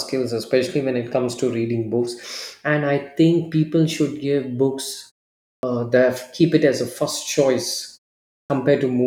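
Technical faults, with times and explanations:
5.59–5.63 s and 8.46–8.50 s: clipped start after a pause. Each follows a 0.56 s silence. The output device wakes late and swallows about 40 ms and 39 ms of onset. After "people should give books", the phrase "that keep it as" starts abruptly, missing its first sounds.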